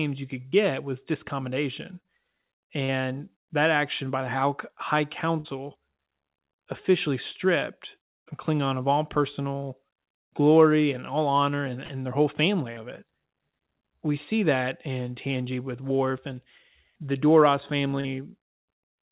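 Short concealed packet loss occurs seven times, at 0.48 s (after "you could"), 2.00 s (after "was discommodation"), 2.84, 5.40, 11.85 (after "and all honor and"), 12.73 and 18.00 s. Each time about 40 ms of the call arrived too late, and the receiver extended the preceding sound before blending back, leaving a brief smear or wobble. All of this sits within a narrowband call path with nothing above 4 kHz, consistent with a G.711-type codec.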